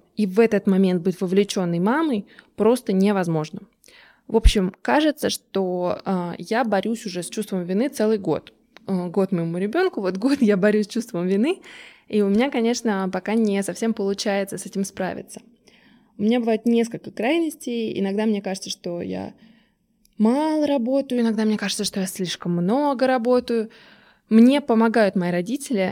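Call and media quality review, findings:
Fine hiss and roughness riding on louder, brighter speech, gone in pauses, throughout. Sample clock jitter in the converter, timing error of a microsecond or so, noise about 40 dB below signal.

Hollow, phasey speech 15.18–21.18 s, after "совсем получается с этим", clearing before "иногда мне кажется что". Channel delay (comb filtering): one channel under half a millisecond late, mono sum, first notch near 1.5 kHz.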